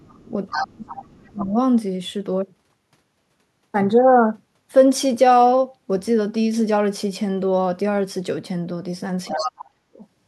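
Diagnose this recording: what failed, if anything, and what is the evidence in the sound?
The other side's voice leaking through appears at 0.02–0.23, 0.48–0.66, 0.87–1.05, 1.40–1.45 and 9.25–9.51 s, ranging from barely audible to nearly speech level. On a spectrogram, second harmonic stacks overlay the talker's. This is likely residual echo the call processing's echo canceller missed.

Speech suppressed in double talk occurs at 0.25–0.31, 0.55–1.55 and 9.31–10.03 s, the last two overlapping those leaks. The talker dips by about 10 dB at first, then by roughly 30 to 40 dB. The waveform envelope caves in, likely the canceller ducking both sides together.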